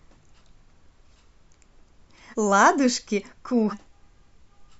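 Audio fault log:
0.68–0.70 s, 2.30–2.35 s and 3.69–3.74 s: compressed frames skipped. The sound jumps ahead about 0.2, 0.1 and 0.4 s in whole 46.4 ms frames.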